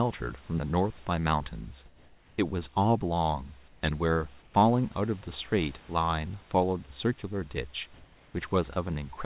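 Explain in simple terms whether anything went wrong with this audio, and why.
A few pauses in the speech sound a bit off. At 1.86 to 2.38 s, 3.68 to 3.82 s, 4.42 to 4.54 s and 7.94 to 8.34 s, the natural room hiss is swapped for a smooth, featureless hiss, slightly louder or quieter than the real background. That's comfort noise in place of the background: the call likely stopped sending sound when nobody was talking, and the receiving end filled the gaps with made-up noise.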